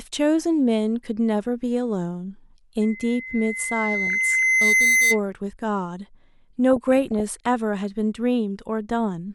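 From 2.81 to 5.2 s, the microphone picks up its own loudspeaker, and a loudspeaker feedback squeal at 2 kHz swells over about two seconds to a shrill tone above the speech. Weak DAB reception lets bit errors through the error correction into the audio data at 4.07 to 4.43 s and 6.71 to 7.47 s. The result is DAB burbling, muddy bubbling chirps over the speech.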